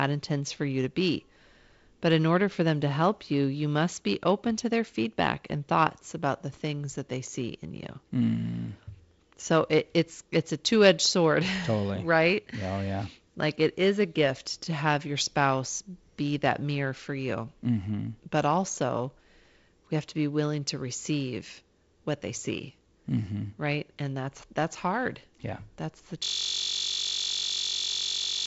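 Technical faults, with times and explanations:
26.24 s to the end, system hang loop: the system froze and the hardware kept replaying one 21.33 ms slice, which fits a 1024-sample buffer, about 105 times. At 46.9 Hz that reads as a steady buzz over the G.722-limited band topping out near 7.7 kHz.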